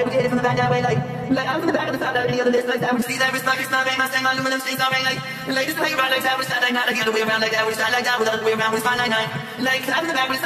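For the first 3.0 seconds the sound is dull and muffled because de-emphasis was applied wrongly. A treble cut with nothing to undo leaves 10 kHz about 11 dB below 1 kHz, which shows on a spectrogram as a smooth high-frequency fade until 3.0 s. Two runs of corrupt frames were concealed. One comes at 2.21 to 2.25 s, and its 36 ms length fits a couple of AAC frames. The other comes at 8.35 to 8.43 s, and its 80 ms length points to about three frames.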